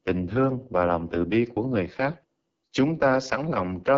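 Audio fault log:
throughout: AMR wideband (HD Voice) codec. The speech passed through AMR-WB at a very low rate, which fits its 6.6 kbit/s mode. Too few pulses reach the vocal tract model to rebuild the voice, so it sounds heavily rough and raspy, with nothing above 7.5 kHz.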